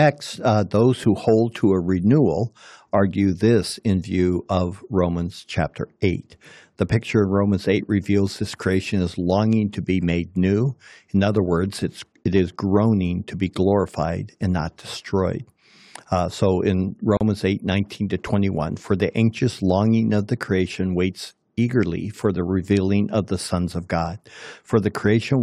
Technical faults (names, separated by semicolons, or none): gap at a join of encoded pieces